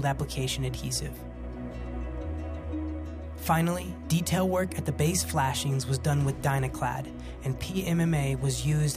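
No technical faults can be heard anywhere in the clip.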